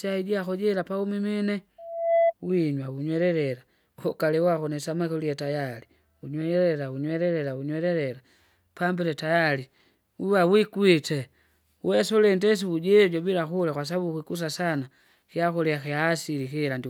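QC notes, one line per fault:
1.78–2.34 s, loudspeaker feedback squeal: a pure tone near 673 Hz swells over roughly 0.4 s until it sits about 5 dB above the speech. A microphone is hearing its own loudspeaker, and at that frequency the loop gain exceeds one, so the tone feeds itself.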